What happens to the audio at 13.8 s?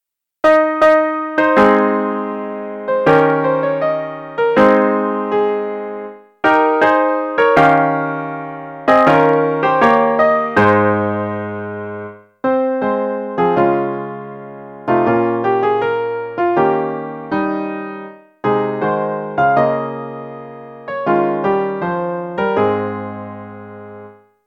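At 13.8 s the audio carries hard clipping, present throughout the clip. The signal was driven about 7 dB past what a stage could pass, so a small fraction of peaks are cut flat. Unlike softer saturation, those squared tops add distortion reaching high up the spectrum on the loudest moments.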